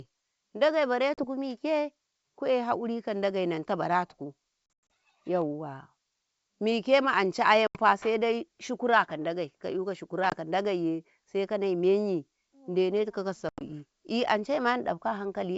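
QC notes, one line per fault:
1.14–1.24 s, packet loss on an ADPCM call: 40 ms drops to hard-edged silence, which fits about four lost packets. The decoder's predictor and step size no longer match the sender's. So "mike ku'ye hakuri ka" returns slightly distorted, then settles.
4.66–4.90 s, packet loss on an ADPCM call: 170 ms is lost in gaps scattered over 240 ms. The longest silent run is 100 ms, and the whole burst fits roughly fifteen packets. Each restart finds the decoder's adaptation out of step, giving brief distortion.
7.67–7.78 s, packet loss on an ADPCM call: An 80 ms hole opens, which fits around seven packets. The step size the decoder resumes with is wrong. So "saidai shukaraka" enters slightly distorted, which clears within tens of milliseconds.
10.30 s, packet loss on an ADPCM call: A short 20 ms dropout fits about two packets. It is brief but still hard-edged. The predictor mismatch leaves slight distortion as the sound resumes and recovers quickly.
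13.49–13.62 s, packet loss on an ADPCM call: Right after "menyin dene tikau ka", 110 ms is lost across 120 ms, with a 90 ms longest run. This fits roughly ten packets. The sound comes back slightly distorted until the decoder's adaptation catches up. Between holes, the G.722 wideband coding carries the speech cleanly up to 7 kHz, with its faint upper-band hiss.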